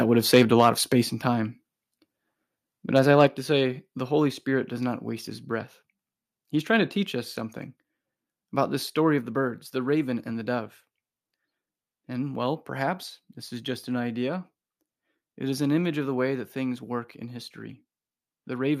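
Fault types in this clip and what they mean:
Microphone overload: the loudest peaks near 0.34 and 2.97 s get their tops flattened into a harsh crackle, likely from input gain set too high.
Microphone volume stepped down: four sudden level drops of about 1 to 4 dB, likely the call software trimming input gain when the microphone ran too loud, two of them just after those overloaded peaks.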